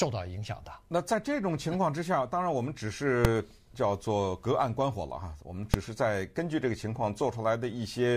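Two sharp bangs cut through this speech recording, one at 3.25 s and one at 5.74 s, and they're the classic sign of invalid numbers at full scale. Somewhere in the processing a calculation blew up into infinite or invalid values, and those got pinned to the maximum output level for a single block. Each burst lasts only about 2.9 ms, which fits a 128-sample block, so rather than a pop-gap-pop you just hear one loud bang each time.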